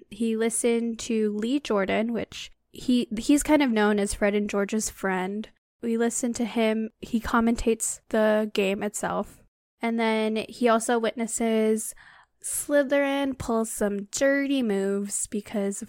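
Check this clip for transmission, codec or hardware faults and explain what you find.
No faults found in this speech recording; nothing to report.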